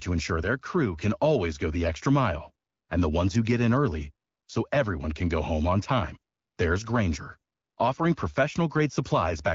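Nothing stood out as a technical problem on listening to this speech recording, which comes through the AMR wideband (HD Voice) codec at 12.65 kbit/s.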